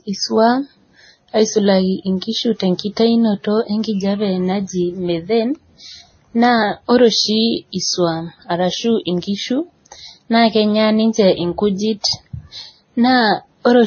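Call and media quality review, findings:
Speech band-limited throughout, nothing above 6.5 kHz: spectrogram shows hard ceiling. Stacked artefacts. Likely transcoding between lossy codecs, ending in Vorbis; the layered damage points to a low-rate MP3 and WMA before it.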